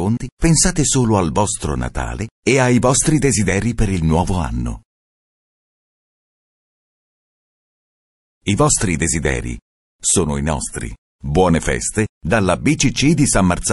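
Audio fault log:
throughout MP3 compression: The whole clip has a watery, swirling quality, with the top end dulled and the quiet detail flickering in and out. This plainly audible damage likely comes from MP3 encoding at a low rate, around 48 kbps. With so few bits, the encoder cuts the treble at a fixed point and drops weaker frequency lines, which switch on and off from frame to frame and leave that unstable, metallic texture.
0.37–0.42 s pre-echo: Just before a sharp attack, a brief hiss rises out of the quiet, about 18 dB above the background and lasting about 53 ms, and the attack itself sounds softened and smeared. The codec spreads quantisation noise across an entire block sized for the loud onset, so that noise also fills the silence ahead of it. The span fits a long block of about 48 ms. The encoder apparently never switched to short blocks here, which would have kept the noise closer to the attack.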